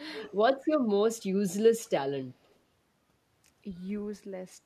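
Speech suppressed in double talk, 0.13 to 0.4 s: the voice dips by roughly 10 dB across about 200 ms, likely an echo canceller turning down both sides while they overlapped. Echo leak, 0.64 to 0.68 s and 1.85 to 1.89 s: faint scraps of the voice return 206 ms late, about 30 dB and then about 40 dB below the speech, likely residual loudspeaker echo the far end's canceller failed to remove.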